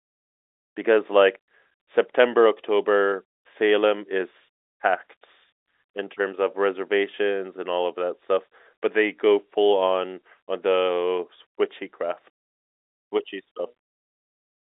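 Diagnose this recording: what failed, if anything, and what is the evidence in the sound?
Nothing stood out on listening; the speech comes through with the narrow bandwidth of an ordinary telephone line and no failure can be heard anywhere along the chain.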